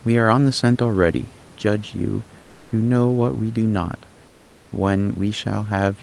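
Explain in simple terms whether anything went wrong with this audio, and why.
Comfort noise in place of the background, at 2.41 to 2.71 s and 4.27 to 4.71 s: the room's real background becomes flat synthetic hiss, likely because the call stopped sending during silence.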